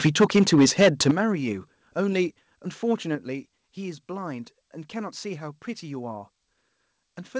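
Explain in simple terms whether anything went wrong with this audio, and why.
Two things go wrong, both at the microphone.

From 0.05 to 1.11 s the speech sounds harsh and crackly on its loudest parts. This is microphone overload, also called clipping. The input was likely set too loud, so the tops of the sound waves hit the ceiling of what the recorder can capture and got flattened. About a tenth of the sound in that stretch is cut off like this, which is what makes it sound rough and distorted.

Three times, the level drops suddenly: at 0.07 s, at 1.11 s and at 3.15 s. This is the microphone volume being stepped down. The likely cause is the call software noticing the distortion and turning the microphone input down in one jump each time. The drop at 1.11 s is the biggest, and the crackling stops right there. The other two are smaller. Each step lowers the voice and the background together, so the loudness shifts abruptly instead of smoothly.

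The audio also passed through a call connection that carries nothing above about 8 kHz, so the highest frequencies are missing.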